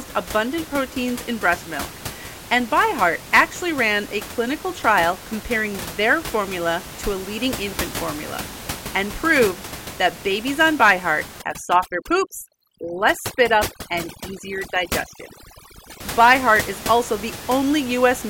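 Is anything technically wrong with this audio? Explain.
Yes. From 11.42 s to 16.0 s the speech shows overdone noise removal. A noise reducer applied too aggressively is pulling individual frequency bands down hard whenever their level sits close to its noise estimate, and the quieter components of the voice fall into that range and get cut along with the room noise, which elsewhere sits about 13 dB below the speech. The result is near-silent gaps dotted with twinkling artefacts.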